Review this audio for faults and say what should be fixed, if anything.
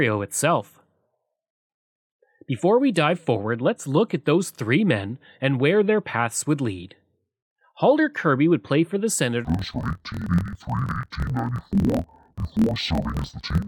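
From 9.45 s onward, interleaved audio read as planar splits each 24 ms block into half-speed halves, so the speech drops an octave and sounds doubled and choppy at the 41.7 Hz block rate. To prevent it, check the stream's declared sample layout before reading any blocks, and deinterleave only when the buffer really is interleaved.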